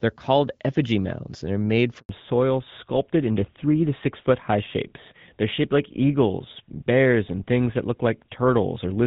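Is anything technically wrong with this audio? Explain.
Yes. Two faults appear in this speech clip.

From 1.99 s to 2.09 s there is a handover gap. The call was passed from one network to another, and for about 100 ms no speech frames arrived, so the voice fades out within a few tens of milliseconds and drops to silence until the new link takes over. On a waveform this shows as a short flat stretch cut into the speech. On a spectrogram it is a clean vertical blank band across all frequencies.

From 2.09 s to the end, the call shows fallback to narrowband. Before the handover, the AMR wideband (HD Voice) codec carries speech with only light coding damage and energy reaching toward 7 kHz. After it, the link runs on an older narrowband codec, most likely GSM full rate, and nothing above 4 kHz survives. The voice turns duller and rougher. A spectrogram shows a hard horizontal ceiling at 4 kHz from that point on.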